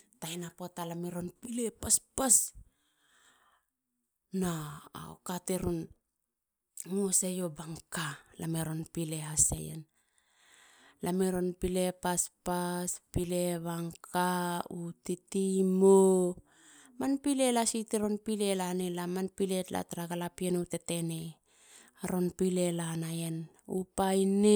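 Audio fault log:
6.26 s, dropped buffer (overrun): the speech jumps ahead, skipping roughly 10 ms, likely because samples were overwritten before being collected.
9.58 s, dropped buffer (overrun): a jump in the speech with a skip of about 20 ms, as the two sides of the gap join directly with no silence.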